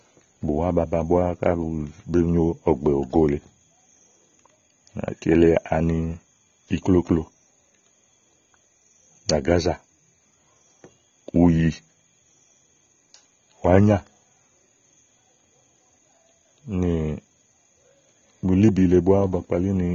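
Speech, likely squeezed through AAC compression at a low bitrate near 24 kbps, so it sounds dull and swirly throughout, with nothing above 7.1 kHz.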